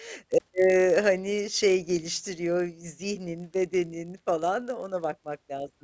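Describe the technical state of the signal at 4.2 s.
At 4.2 s the speech carries a resampler restarted on every block, a fault present throughout the clip. Each 20 ms block was converted from 48 kHz to 16 kHz alone, leaving small errors at every edge. These form a 50 Hz buzz riding on the signal.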